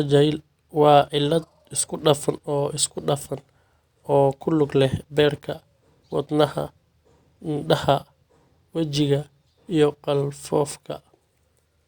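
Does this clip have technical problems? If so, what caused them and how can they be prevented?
No, nothing in this speech recording points to a technical fault, so there is no cause to trace and nothing to prevent.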